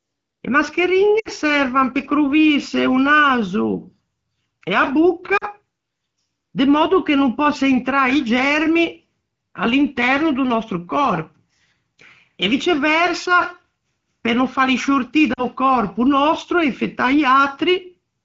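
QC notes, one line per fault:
1.19–1.28 s, 5.37–5.45 s, 15.34–15.44 s (between "pe no fâli sciortî" and "còrpo nòstro e infettâ"): lost AMR speech frames. About 60 ms of concealment in the first gap, which fits three 20 ms frames, and about 40 ms in each of the others. The decoder repeats the last pitch and vocal-tract settings at falling gain, so the sound fades to near silence within two frames. The spectrogram shows frozen, repeated harmonics fading under the AMR-WB 7 kHz ceiling, and the waveform dips in envelope before recovering.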